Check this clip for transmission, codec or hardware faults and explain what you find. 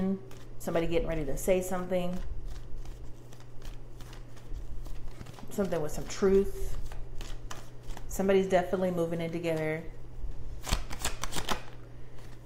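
One hardware fault runs the whole clip: timecode bleed. A faint, steady chirping warble sits about 40 dB below the sound. Linear timecode at 24 frames per second is leaking from a neighbouring track or cable, toggling between roughly 1 and 2 kHz.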